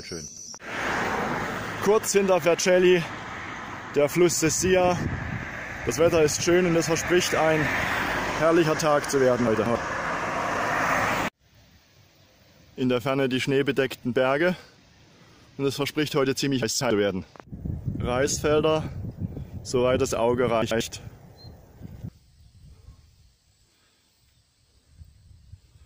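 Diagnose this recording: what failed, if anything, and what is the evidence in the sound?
Chunks out of order at 0.28 to 0.46 s, 9.47 to 9.75 s, 16.63 to 16.90 s and 20.62 to 20.81 s: each moment sounds briefly jumbled. The fault sits at the driver or buffer stage. Blocks of 92.88 ms, which fits a 4096-sample buffer at 44.1 kHz, were written late by one or two chunks. They play after their successors, so nothing is lost, but the sequence is scrambled.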